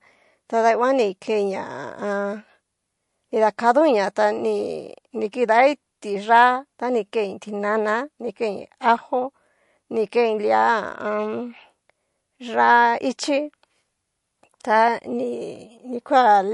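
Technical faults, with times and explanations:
Throughout, low-bitrate audio saved at a high bitrate: the speech stops dead at 11.3 kHz and carries the smeared, swirly coding artefacts of a heavily squeezed MP3, yet the file is sized like a generous one. The likely cause is an earlier encode around 48 kbit/s that was later re-saved at a far higher rate, which keeps every earlier loss. Unlike simple band-limiting, the artefacts remain; unlike plain low-bitrate coding, the file is large.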